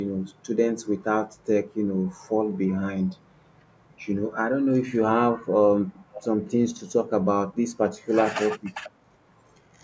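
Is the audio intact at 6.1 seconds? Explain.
No. From 6.11 to 6.24 s there is an echo leak: a faint, delayed copy of the speech, trailing the original by about 472 ms and sitting roughly 15 dB below it. This is likely from a loudspeaker on one side of the call whose echo canceller let a scrap of its microphone pickup slip back. On a spectrogram it appears as a weak repeat of the earlier speech pattern; the waveform shows a small extra burst inside that span.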